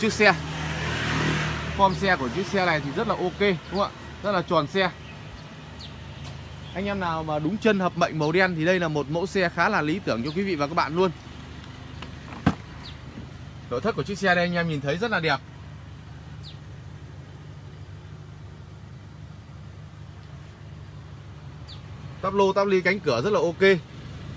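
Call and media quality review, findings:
No faults found.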